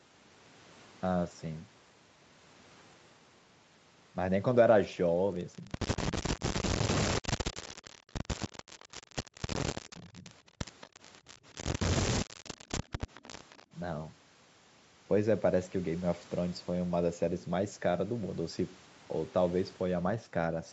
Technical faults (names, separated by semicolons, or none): speech suppressed in double talk; echo leak; background gated by the echo canceller